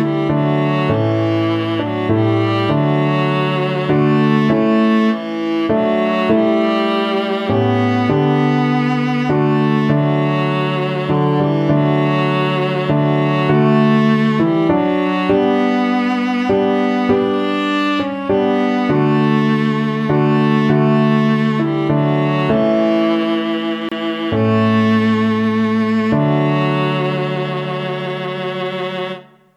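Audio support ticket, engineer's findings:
Gap at a join of encoded pieces, 23.89–23.92 s. Gap of 27 ms cuts into continuous sound, edges smeared. Sound resumes where it stopped. Component: segment concatenation. Separately encoded pieces joined untrimmed; encoder start delay and final-frame padding left in.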